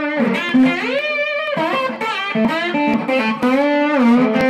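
Regular ticks run through the audio from about 0.49 s to 4.41 s, one every 0.49 s, about ten in all, each a tiny skip where around 10 ms of sound simply goes missing and the rest closes up. These are periodic USB or driver dropouts: something in the background is stalling the USB link or the audio driver on a fixed cycle, so at each stall a short stretch of samples is lost rather than filled.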